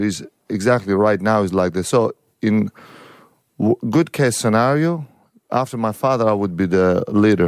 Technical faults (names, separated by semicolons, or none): none